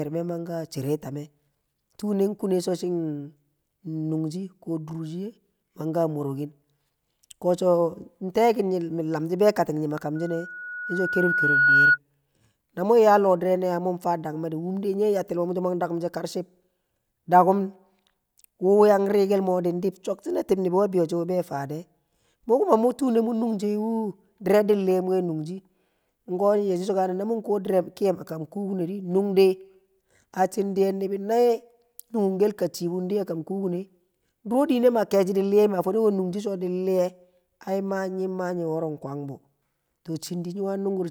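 Speech, with a loudspeaker feedback squeal from 10.15 to 11.98 s: a 1.5 kHz tone swells over a second and a half, ending well above the voice, as mic and speaker loop.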